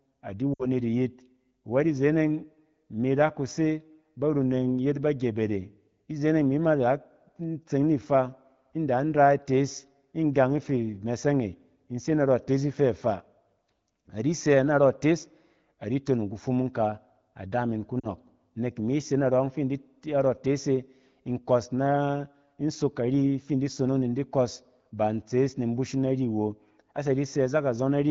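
At 0.53–0.67 s and 18.0–18.07 s, after "ka ada min ku", speech drops to near silence: lost AMR speech frames, which the decoder concealed by repeating fading parameters.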